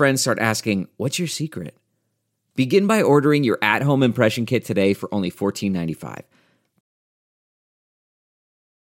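At 6.81 s the speech stops abruptly and the rest of the clip is silence, with no room tone or noise floor, lasting about 2.2 s to the end. This is an audio dropout to silence: the input feed was lost, likely through a disconnected device, a failed link or an accidental mute, while the recorder kept writing silence. Whatever followed the cut-off point was never captured.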